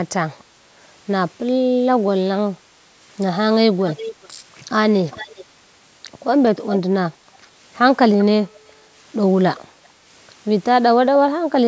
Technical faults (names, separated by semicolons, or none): echo leak